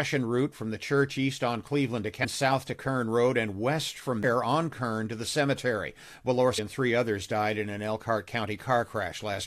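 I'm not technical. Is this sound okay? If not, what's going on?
No. You'll hear three brief glitches in the speech: at 2.23 s just before "south to", at 4.23 s right after "and west from", and at 6.57 s just before "and three others". This is damaged data in a compressed stream: part of the file got corrupted, so the player briefly misreads that spot before recovering.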